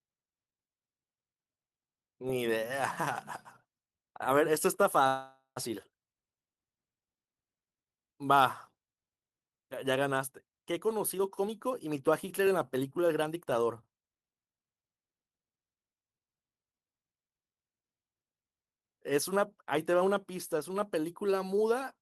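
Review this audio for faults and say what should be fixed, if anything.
A call audio freeze runs from 5.07 to 5.58 s. The speech stops and a fading buzz fills about 489 ms, ending in 90 ms of silence. It likely comes from delayed packets draining the jitter buffer. On a spectrogram, the last frame's harmonics smear into flat horizontal bands that decay to a blank strip. This adds 489 ms of delay without losing any audio. To prevent it, stabilise the network path or allow the jitter buffer a deeper target so brief delivery stalls are absorbed.

A jitter buffer speed-up runs from 10.77 to 14.02 s. The speech plays at about 115% speed at unchanged pitch, with roughly half a second trimmed away in pitch-period slices. The waveform shows tightened syllable spacing, while the spectrogram's harmonic spacing stays the same. To prevent it, drain excess buffered audio more gradually and spread the removal over a longer stretch so the hurried pace isn't audible.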